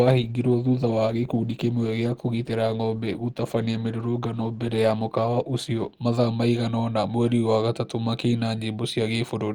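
For the first 6 seconds the speech sounds dull and smeared, with the treble thin or synthetic and coding artefacts stronger. At 6.0 s, just before "mathaa maigana ona mweri", the quality jumps with no gap, and the top end then reaches about 20.1 kHz. This is an adaptive stream starting at a low bitrate: the player began on a cheap rendition to start quickly, which fits Opus at 16 kbit/s, then stepped up, which fits 64 kbit/s, once it had measured the connection.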